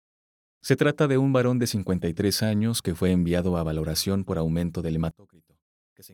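Right after "valoración por aumento del", from 5.11 s to the end at 6.13 s, the speech suddenly drops by about 26 dB into a faint remnant. That's likely one channel inverted: the shared centre cancels when the two sides are summed to mono.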